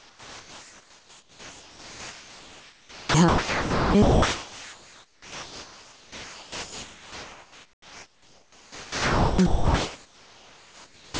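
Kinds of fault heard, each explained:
Overdone noise removal: A noise reduction stage was set far too strong, switching off any frequency band near its noise estimate throughout the clip. Quiet parts of the speech vanish with the noise, leaving a background that drops away and breaks up into twinkling specks.
Gain pumping: The input gain was likely set too high, with a fast limiter clamping it down on every loud sound. Throughout the clip the background ducks by a few decibels under each loud passage, squashing loud and soft together.
Comfort noise in place of the background: The sender likely stopped transmitting during pauses, and the receiver filled them with synthetic noise. From 0 to 3.1 s, 4.0 to 9.4 s and 9.5 s to the end, the real background becomes steady, featureless hiss, about 11, 4 and 6 dB quieter.
Onset clipped by the voice detector: The sender's voice detector was likely slow to register that speech had resumed, so the first moments were never sent. 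At 2.94 s about 200 ms is lost and at 8.94 s about 440 ms, and both times speech starts abruptly.
Sound dropped by the voice detector: The voice detector likely mistook sound for background and stopped sending. From 3.28 to 3.94 s, about 550 ms of sound gives way to steady noise, and the speech returns only once the detector triggers again.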